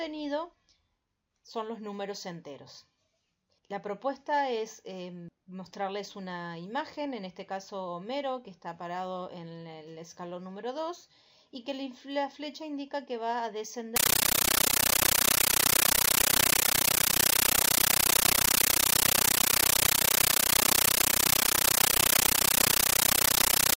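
From 13.96 s to the end, the audio gives way to a compressed stream played as audio: an AC-3 bitstream passed through as if it were ordinary samples instead of being decoded. It is heard as loud, harsh chattering static pulsing 31.25 times a second. On a waveform this shows as blocks of noise about 13.3 ms long separated by near-silent gaps where the padding falls. On a spectrogram it appears as broadband vertical stripes with silent gaps between them.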